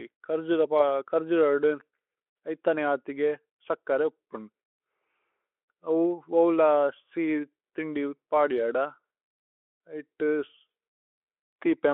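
The speech arrives intact through a Speex path confined to the telephone band of roughly 300 Hz to 3.4 kHz, with no dropouts, distortion or other technical faults anywhere in the signal.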